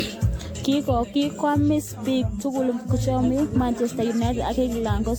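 Generation loss runs through the whole speech clip. The sound is swirly, smeared and hollow, and attacks blur. Nothing remains above 18.6 kHz. The likely cause is roughly seven rounds of lossy AAC coding, each adding fresh quantisation noise on a shifted frame grid.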